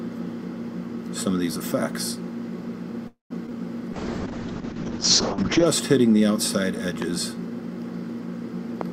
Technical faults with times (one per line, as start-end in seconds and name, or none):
3.07-3.32 call audio freeze
3.46-3.52 short concealed packet loss
3.95-5.72 call bitrate drop
7.02-7.04 loud pop
8.81-8.83 loud pop